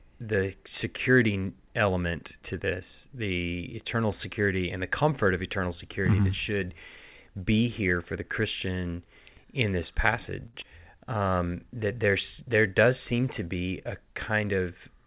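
At 10.46 to 10.55 s there is a short stall from a late packet. The jitter buffer ran dry, so the last sound is held and stretched for 78 ms with a slight buzz or dip. Then playback resumes exactly where it stopped. Unlike a dropout, nothing is lost. The sound simply waits in place.

Right after it, at 10.61 to 10.63 s, comes a skip ahead. About 70 ms of audio is dropped, and the two edges are butted together with barely 10 ms of joining. Unlike the stall, nothing is held. The sound lurches forward and material is missing.

From 10.91 to 11.31 s a jitter buffer slow-down follows. Repeated pitch periods add 60 ms, and delivery drops to 87% speed with the pitch unchanged, so the sound drags. A late-packet stall would freeze a single sound instead of slowing a whole stretch evenly.

From 13.47 to 14.59 s a jitter buffer speed-up runs at 108% speed, trimming roughly 100 ms by cutting out small pitch-period slices. 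The sound feels hurried but keeps its pitch. Unlike a skip ahead, there is no single audible jump. The loss is spread thinly across the span.

Throughout, the call path cuts everything above 4 kHz, which fits 64 kbps G.711 mu-law.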